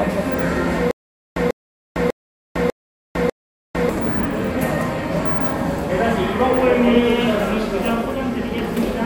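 From 0.91 s to 3.89 s a stutter with silent gaps appears, likely from the player or stream stalling and replaying its last fragment at each retry. A 144 ms burst repeats five times, each followed by 452 ms of dead silence, so the sound lurches every 0.6 s and the audio meant for that stretch never arrives.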